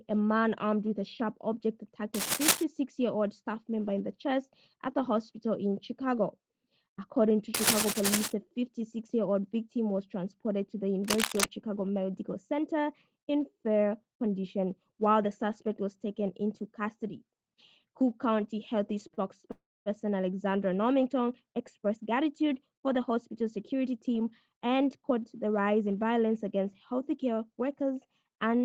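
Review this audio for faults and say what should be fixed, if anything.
Cable scratch noise at 2.14–2.63 s, 7.54–8.32 s and 11.05–11.46 s: rough, uneven rustling bursts at about the same level as the sound itself. This is likely a worn lead or connector whose contact resistance flickers as it moves. On a spectrogram these appear as ragged broadband smears, and on the waveform as jagged spikes over the signal. To prevent it, replace or reseat the cable and connector and keep the lead still while recording.

Short stalls from a late packet at 19.07–19.13 s, 19.14–19.20 s and 19.41–19.46 s: the last sound is held for 27 ms, 32 ms and 21 ms while the jitter buffer waits, then resumes with nothing lost. The waveform shows brief repeated, smoothed cycles, and the spectrogram shows short horizontal smears. To prevent it, give the jitter buffer enough headroom for the network's delay variation.

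Call audio freeze at 19.51–19.89 s: the buffer likely ran dry for 346 ms. The held sound decays into a silent stretch of 260 ms before the audio picks up where it stopped. It looks like a fading tail and then a flat line on the waveform, with an empty vertical band on the spectrogram. To prevent it, fix the network path that is delaying packets in bursts.

Jitter buffer speed-up at 21.60–25.95 s and 28.23–28.62 s: after the backlog, the receiver trimmed pitch-period fragments so playback ran at 107% and 111%, removing roughly 300 ms and then about 50 ms. The pitch stays the same, but the sound is hurried. On the spectrogram, features are compressed in time. To prevent it, use gentler, slower buffer-drain adaptation.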